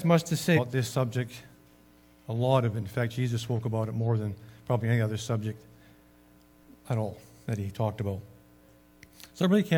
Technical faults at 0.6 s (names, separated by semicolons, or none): compressed frames skipped